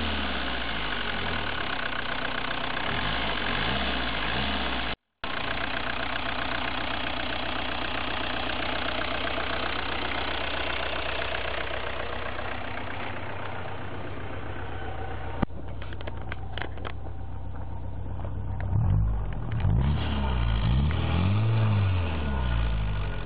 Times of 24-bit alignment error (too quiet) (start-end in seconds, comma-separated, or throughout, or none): 4.94-5.24